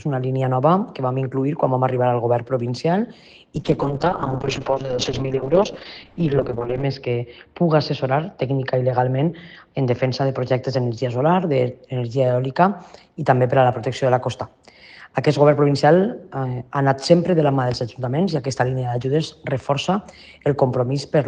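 Audio over an Opus call path carries a call bitrate drop from 3.56 s to 13.15 s: the top end narrows from 12 kHz to 8 kHz and the sound turns rough and watery, which fits a fall from 32 to 6 kbps, worst for about 3.3 s. Unlike packet loss, there are no gaps or stutters.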